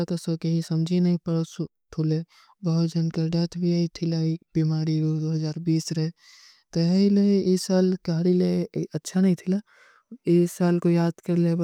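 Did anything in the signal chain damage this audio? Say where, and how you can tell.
No, nothing in the chain audibly damaged this speech.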